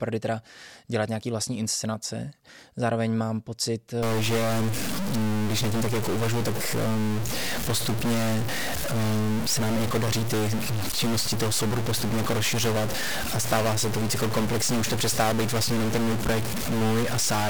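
A speech recording that turns harsh and buzzy from 4.03 s and stays that way to the end. The distortion follows the waveform rather than sitting on top of it, and the pauses between phrases fill with noise instead of going quiet. That points to a stuck bit, likely from a faulty data line or converter. One bit is held fixed, so about half of all sample values land off by a step of roughly -25 dBFS, a fairly high-order bit.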